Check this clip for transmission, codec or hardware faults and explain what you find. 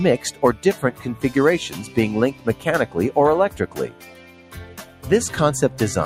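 One fault runs through the whole clip, and it also causes three distinct dips.

The first is a noise suppressor applied to music or sounds. A suppressor built for speech is active here. It treats steady tones and decaying tails as noise and pulls them down. Its loss swings by around 10 dB across the clip. Attacks get through, but sustained parts sink. The result is a pumping, thinned texture throughout.

The second is sound cut by the noise suppressor. This happens at 0.32 to 0.64 s, at 2.33 to 2.66 s, and at 3.52 to 5.05 s. In each stretch the suppressor mistook the sound for noise and turned it down more than the surrounding audio. The deepest drop is about 8 dB. The first two dips are brief. The third lasts roughly a second and a half. Held sound sags and fading tails end early.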